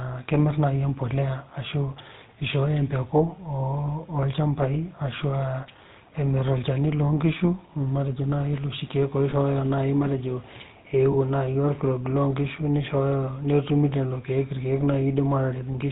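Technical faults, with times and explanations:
Throughout: GSM full-rate codec. The speech has a constant buzzy, gravelly roughness and nothing above 4 kHz, consistent with the 13 kbps full-rate coder modelling the vocal tract and exciting it with sparse, regularly spaced pulses. Unlike brief dropouts, this coloration never lets up.
3.86–3.90 s, 9.30–9.33 s, 11.12–11.15 s: lost GSM frames. Each is a single 20 ms frame that the decoder filled by repeating the last good frame's settings, giving a short metallic ring rather than a silent gap or click.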